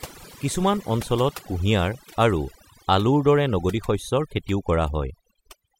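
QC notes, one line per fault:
Throughout: overdone noise removal, with aggressive spectral gating muting bands near the noise floor, leaving near-silent gaps with twinkling specks; spectrogram shows patchy, blotchy holes.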